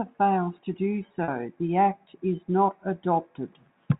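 Packet loss with pitch repetition occurs from 1.24 to 1.28 s, where about 40 ms of speech goes missing, which fits two 20 ms packets. To bridge the hole, the receiver replays the last pitch period over and over, so the sound briefly hangs on one held, slightly buzzy tone before normal speech resumes. The surrounding audio carries the narrow, 4 kHz-limited character of G.711 telephone coding.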